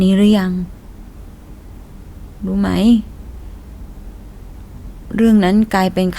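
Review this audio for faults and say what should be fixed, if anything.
Nothing stood out on listening to this speech, so there is nothing here that needs fixing.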